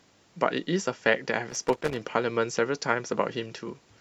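From 1.49 to 2.03 s the speech is broken by loose connector crackle: a worn or dirty contact making and breaking, chopping the signal into irregular scratchy bursts. Its ragged, uneven timing separates it from the steady, regular clicking of a digital dropout or buffer fault.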